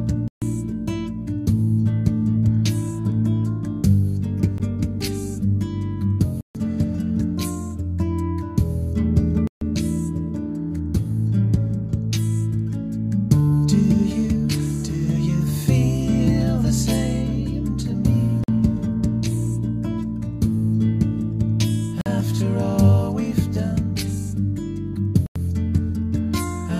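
Blocks of digital silence occur at 0.28–0.42, 4.58, 6.41–6.55, 9.47–9.61, 18.44–18.48, 22.01–22.06 and 25.26–25.36 s. Most gaps (46, 93, 139 ms) fit whole 2048-sample buffers left unfilled. Unlike a faded dropout, each drops abruptly to silence with no fade. The 16 ms gap ticks, the rest leave holes.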